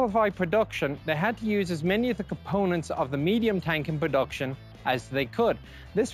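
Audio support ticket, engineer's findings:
Imaging from linear upsampling, whole clip. Rate conversion by straight-line interpolation, which fits a 16 kHz source raised to 48 kHz. Top of band dulled; mirrored copy of spectrum at 8 to 16 kHz, roughly 35 dB down, heard as metallic shimmer on bright high content.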